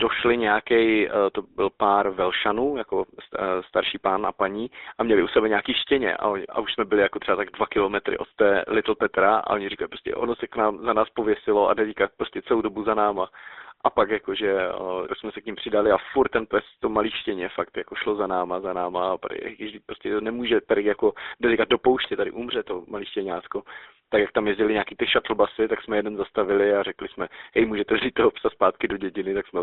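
From start to finish the speech carries GSM full-rate codec damage: a buzzy, gravelly roughness from coding the voice as a vocal-tract filter fed by sparse regular pulses, consistent with 13 kbps. The band sits between 300 Hz and 3.7 kHz, with nothing above.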